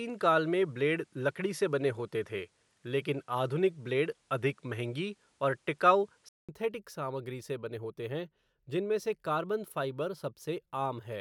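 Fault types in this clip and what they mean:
input switched to a poorer device: sound tops out near 11.6 kHz until 6.49 s, then a 200 ms gap with level and noise shifts, likely a device change, not filtering.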